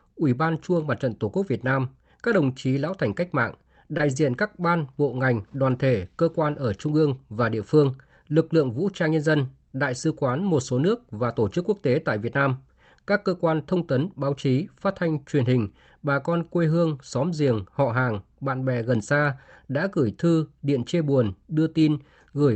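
At 3.97 to 4.01 s, between "lão thành cách mạng" and "diện các ban bộ", there is a short concealed packet loss. About 20 ms of the speech never arrived in time, and the receiver filled the gap by extending the preceding sound before blending back into real audio. It comes across as a tiny smear or wobble rather than a hole of silence, which distinguishes it from a plain dropout. The call path's Opus coding limits the band to about 8 kHz.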